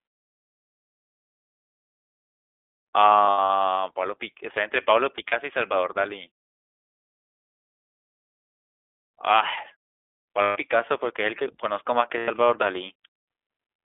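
Throughout, the audio sounds narrow and slightly rough and synthetic, with nothing above 3.5 kHz or below 300 Hz. This is plainly audible iLBC codec damage: each 20 ms frame is coded on its own at a low rate, which fits iLBC's 15.2 kbps mode.

At 3.26 to 3.51 s, the sound smears into a held, faintly buzzy, breathy tone, with about 160 ms of audio missing in bursts spread over 240 ms, the longest run around 70 ms. These are lost iLBC frames: the decoder fills each gap by repeating the last pitch cycle mixed with noise. The same happens at 5.16 to 5.34 s, where 60 ms is missing across 160 ms, then for 140 ms at 10.42 to 10.58 s and for 100 ms at 12.18 to 12.30 s. Because every frame decodes independently, the sound snaps back almost immediately after each gap. Pauses fade to silence and recover in time for the next sound.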